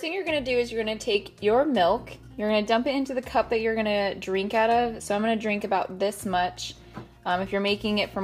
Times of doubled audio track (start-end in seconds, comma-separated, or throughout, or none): none